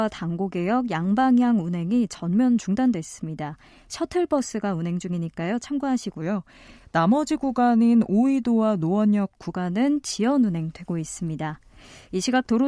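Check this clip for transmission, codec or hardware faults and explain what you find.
One fault is present, a wrong sample rate, from 6.21 to 9.49 s. Over that span the speech slows and drops in pitch together. Playback runs at about 0.92 times normal speed, and the pitch falls by about 1.5 semitones. The samples are being clocked out slower than they were captured, with no rate conversion in between. The ratio fits audio recorded at 24 kHz but played at 22 kHz. The voice sounds lower, heavier and slightly dragged.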